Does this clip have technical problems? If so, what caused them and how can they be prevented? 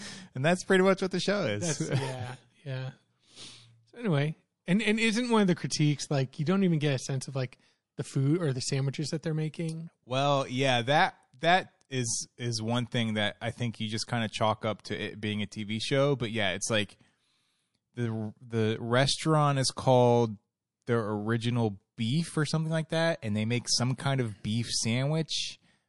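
Yes. Throughout the speech there's plainly audible MP3 compression damage: the quieter detail has a watery, swirly quality as weak frequency components flicker in and out between frames. S sounds come out metallic and chirpy. The likely cause is an MP3 encode starved of bits, and the amount of damage fits something around 48 kbps. To prevent it, keep a lossless master and encode at a much higher bitrate.

At 23.97 s there's a pre-echo: a short smear of hiss, about 17 ms long and roughly 10 dB above the surrounding floor, just ahead of a sharp attack. The codec spread its quantisation noise across the whole transform block, so noise meant to be masked by the loud onset leaked into the quiet moment before it. The smear points to a long window of around 48 ms, with no switch to short blocks. An encoder that switches to short blocks on transients, or simply more bitrate, would keep that hiss from showing up.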